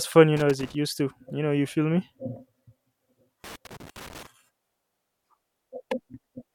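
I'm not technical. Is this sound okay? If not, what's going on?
No. Scratchy, irregular crackling bursts cut into the speech at 0.37 to 0.75 s and 3.44 to 4.27 s: loose connector crackle, from a worn or dirty contact flickering on and off.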